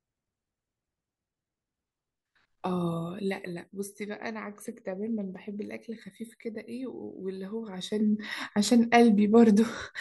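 No technical faults can be heard in this speech clip.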